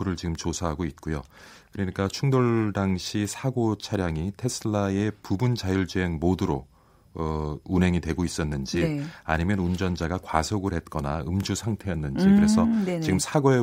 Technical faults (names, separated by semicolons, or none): chunks out of order